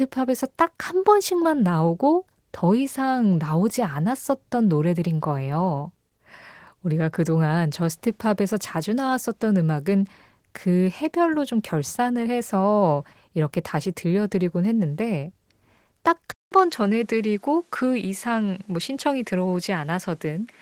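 From the start the speech carries plainly audible Opus voice compression at 16 kbps in hybrid mode. The codec keeps the full band: a linear-prediction coder handles the range up to 8 kHz, and a transform layer handles everything above it. At this bitrate the excitation is coded coarsely, which gives the voice an audible coded texture. On a spectrogram the content above 8 kHz looks blocky and patchy, in steps that fit 20 ms frames.

At 16.32 s the audio drops out for about 200 ms. When it returns, the sound has changed character, most likely because the input switched to a poorer device. The loudness stays roughly the same, but nothing reaches above 13 kHz, and a new background noise sits about 40 dB below the speech, giving a different tone through to the end. A waveform shows a flat gap at the switch. A spectrogram shows that gap, then a hard ceiling at 13 kHz and a raised noise floor.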